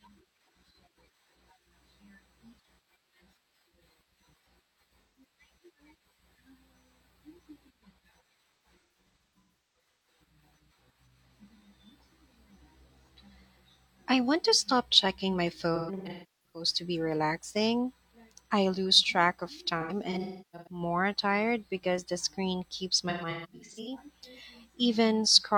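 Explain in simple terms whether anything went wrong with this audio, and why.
AAC frame loss with concealment hits at 5.0–5.2 s, 8.6–10.1 s, 15.8–16.7 s, 19.8–20.8 s and 23.1–24.0 s. Chunks of the compressed stream went missing, and the player patched each gap by reusing the last good sound, leaving brief smeared, noisy patches in the speech.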